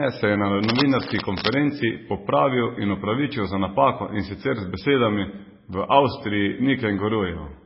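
Speech throughout with heavy MP3 compression damage, likely from a very low bitrate, which fits roughly 16 kbps. Nothing sounds above 5.6 kHz, and a spectrogram shows a hard flat ceiling there, with speckled, flickering gaps below where weak frequency lines switch on and off, heard as a watery, swirly smear on consonants.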